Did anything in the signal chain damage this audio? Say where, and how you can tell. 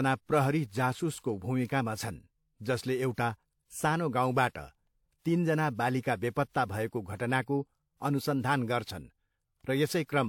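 Yes, at the codec stage, and throughout the speech rather than at any one moment. Nothing reaches above 18.4 kHz, and two different kinds of coding artefact sit on top of each other, which points to likely transcoding between lossy codecs, with a WMA encode near 96 kbit/s re-encoded as HE-AAC near 40 kbit/s. The second encoder wastes bits reproducing the first one's artefacts and adds its own, so the speech carries both sets of damage at once.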